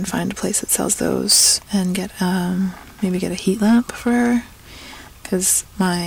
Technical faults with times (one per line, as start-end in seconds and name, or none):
0.55-1.55 hard clipping
3.48-4.29 hard clipping
5.34-5.89 hard clipping